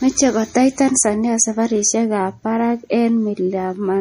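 From start to finish the speech has a watery, swirling quality, and nothing is heard above about 15.2 kHz, so the top of the sound is cleanly sheared off. This is likely MP3 compression, and the damage is plainly audible. Short of bits, the encoder cut the treble at a fixed point and dropped weaker frequency detail that flickers in and out from frame to frame, which fits a low bitrate of about 40 kbps.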